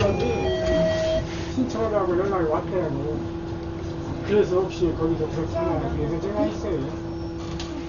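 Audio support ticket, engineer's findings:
Dull, band-limited throughout, nothing above 7 kHz; rough fluttering noise around tonal parts. Likely Dolby Digital compression at a very low rate, around 40 kbps: starved frequency lines refilled with dither. Fluttering fill noise, not plain lowpass, distinguishes it.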